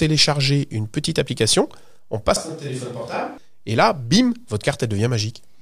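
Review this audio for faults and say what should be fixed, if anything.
From 2.36 s to 3.38 s, starting just as "et là bim" is spoken, the speech suddenly turns roomy and hollow, drops by about 10 dB, loses bass and sits in background noise roughly 25 dB below it. This is likely a switch to a distant microphone after the close microphone's signal dropped out. The waveform shows an abrupt step down in amplitude at the start and back up at the end. A spectrogram shows thinner low-frequency energy, smeared reverberant tails and a raised noise floor across the span. Monitor the close microphone's feed and secure its connection, or record a backup close track so a dropout never forces the edit onto a distant pickup.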